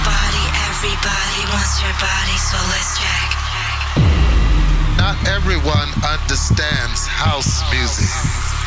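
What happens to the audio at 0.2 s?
Nothing goes wrong at 0.2 s; the audio there plays through intact, with no audible fault.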